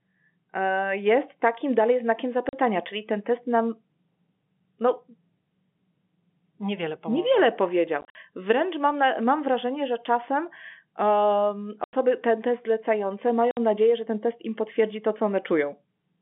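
Packet loss filled with silence punches hard-edged holes into the speech: at 2.49 s (40 ms, after "jest takim dalej znakiem"), 8.01–8.15 s (100 ms scattered, longest run 50 ms), 11.84 s (90 ms, after "wrażenie że czasem um") and 13.51 s (60 ms). The lengths step in 10 ms units, which fits 10 ms packets. Dead silence, rather than repeated or smeared sound, separates this from concealed loss. Across the G.711 telephone band of about 150 Hz to 3.4 kHz, the gaps drop to complete silence.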